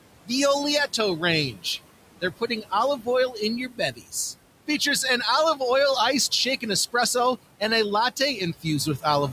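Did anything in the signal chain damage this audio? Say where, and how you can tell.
Yes. The damage comes from call processing, specifically the noise suppressor.

Noise suppressor artifacts run through the whole clip. The room noise sits about 14 dB below the speech. Between phrases, that background drops by about 18 dB. Under the speech it comes back. So the noise floor pumps up and down with the talker. The suppressor lowers each frequency band it judges to be steady noise, frame by frame. That lowering is what you hear.

Speech cut by the noise suppressor appears three times. At 1.52 to 1.65 s, a short stretch sinks by up to about 15 dB. At 2.21 to 2.72 s, just before "oil in your", the drop reaches about 17 dB. At 3.68 to 4.13 s, just after "oil in your", it is about 15 dB, over roughly a third of a second. The suppressor mistook soft speech for noise and turned it down.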